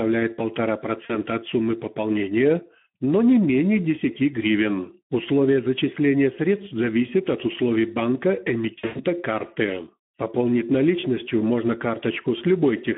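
From start to finish the speech has that hoarse, grainy Speex codec sound: the excitation is starved of bits, which points to a low rate of around 11 kbps, and the band stops at 150 Hz and 3.4 kHz, so it's muffled telephone-line audio.

At 1.05 s, about 40 ms of sound (likely two frames) is lost to VoIP packet loss concealed by the speech codec: the decoder stretches its last pitch into a brief smear. At 8.79 to 9.04 s it's worse: 160 ms lost across 200 ms, the longest gap 100 ms, giving a fading, broken stretch.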